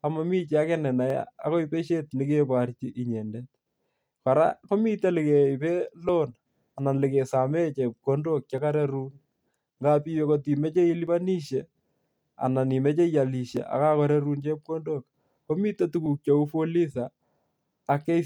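Short skips of about 7 ms at 1.10, 6.09, 8.58, 11.07, 13.57 and 16.06 s point to audio missing between chunks, likely from 2.5-s chunking. Each shows as a waveform discontinuity and a thin vertical spectrogram line.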